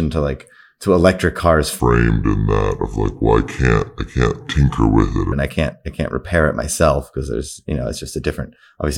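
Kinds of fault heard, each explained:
Section at the wrong speed: After "like to electric cars", the speech drops to 0.7 times its speed until "and I can't I". Pitch falls by roughly seven semitones, so the voice turns deep and dragging. A playback clock mismatch is the likely cause.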